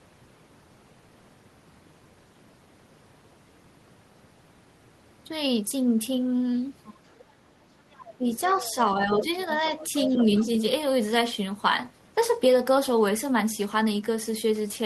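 A speech clip with a second voice underneath it. The other side's voice leaks through at 6.85–6.94, 7.92–8.74, 9.14–9.21 and 9.8–10.45 s. It sits roughly 20 dB below the talker, rising to about 10 dB below near 9.2 s. It is likely loudspeaker echo that the canceller left behind. The talker's speech is also suppressed in double talk. The level dips by about 10 dB at 8.18–8.57 s and by about 5 dB at 8.98–9.65 s. Both dips overlap the leaking voice. The likely cause is the echo canceller turning everything down while both sides spoke.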